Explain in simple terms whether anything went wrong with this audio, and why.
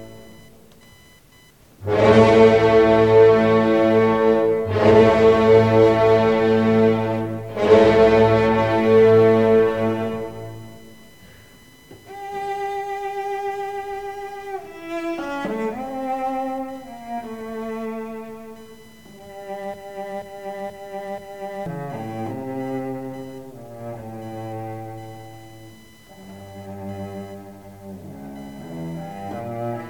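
A faint, fast buzz sits underneath the whole recording, quiet and well below the main sound, pulsing at roughly a thousand times a second. This is computer activity noise. As the computer's processor, graphics card or mouse changes how much power it draws, it disturbs the electrical ground the audio circuit shares, and that disturbance leaks in as buzzing that follows the computer's workload rather than the sound being recorded.

From 19.74 to 21.66 s the audio gets stuck: a piece about 0.48 s long plays four times in a row, exactly the same each time, like a scratched record skipping. This is a broken-record loop. The likely cause is that the player or stream stalled and kept resending the last chunk it had. Whatever should have played during those two seconds is missing.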